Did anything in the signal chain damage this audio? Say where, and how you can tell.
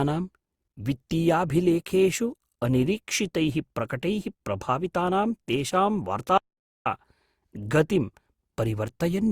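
Yes. Throughout the speech there is generation loss at the codec stage: swirly, hollow smearing and blurred consonant attacks, likely from about five successive Opus passes at 64 kbit/s. On a spectrogram, smeared transients appear below a band edge near 20.2 kHz.

An audio dropout to silence runs from 6.38 to 6.86 s, about 480 ms, with the speech cutting out mid-flow and returning abruptly. The waveform is a flat line and the spectrogram a fully blank column with no room tone, likely from lost input at the capture stage.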